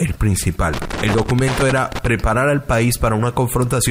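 From 0.73 to 2.07 s there is loose connector crackle: a worn contact intermittently breaking the signal path, heard as irregular scratchy bursts.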